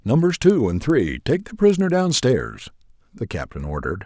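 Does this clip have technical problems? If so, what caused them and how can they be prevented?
Yes. Throughout the speech, a regular tick at 10 Hz sits under the sound and disappears in pauses, a sign of a resampler restarted on every block. Each 100 ms block was rate-converted in isolation, so the filter lacked real neighbouring samples at every block edge and left a small error there. To prevent this, run one continuous resampler across the whole stream and carry its filter state from block to block.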